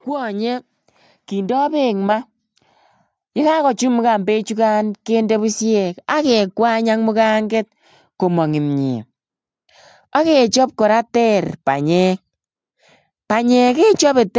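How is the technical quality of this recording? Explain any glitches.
One glitch stands out in this call-processed speech: an automatic gain rise near the start. Content stops at about 8 kHz, as expected from call microphone processing.

Automatic gain rising, 1.29 to 2.13 s: the automatic gain control judged the input too quiet and raised its gain by about 4 dB over that 0.84 s span. The voice and the background noise swell together. On a waveform the envelope widens steadily across the stretch, and a spectrogram shows every band, noise floor included, brightening at once.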